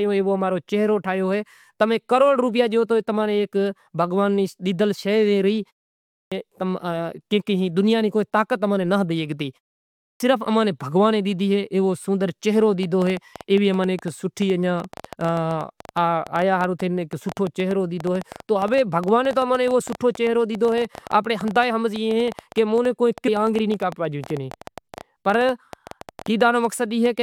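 Twice the output device appears to drop into a sleep state during short pauses of about 0.3 s and then takes time to wake and relock, so the opening of the next phrase is lost. This clipped start after a pause occurs at 5.94 s, where about 376 ms is swallowed, and again at 9.81 s, where about 392 ms goes missing. Each time the speech jumps in abruptly out of silence, with the initial sounds cut off.

From 12.83 s to 27.07 s, a train of clicks runs over the audio, most likely caused by interference from nearby equipment or a faulty connection or power supply repeatedly injecting short pulses. The clicks arrive at roughly 9.5 per second, but at an uneven pace, adding up to around 150 over that stretch. They are similar in shape and peak about 5 dB above the speech, so they come across as a ragged ticking or popping laid over both the talking and the gaps between phrases.

At 23.27 s, a stream segment appears to have been skipped, most likely because one segment of a segmented stream failed to load and the player carried on with the following one. 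The speech lurches ahead past the missing material, marked by a small blip at the join.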